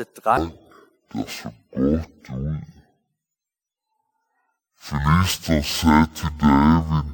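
From 0.37 s to the end, the speech plays at half speed and a full octave low. This is stereo read as mono. The left and right samples are interleaved, but the player reads them in sequence as one channel. Each moment of sound is stretched over twice as many samples. Timing slows to 0.5 times and pitch drops by 12 semitones. The voice sounds slow, deep and heavy. A faint mirrored copy of the sound also sits in the upper half of the spectrum.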